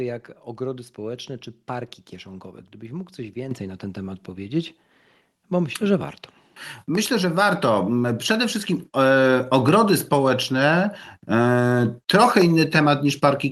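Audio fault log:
3.51 s: microphone volume stepped up. The input gain rose by about 8 dB in a single step, so voice and background noise jump louder together.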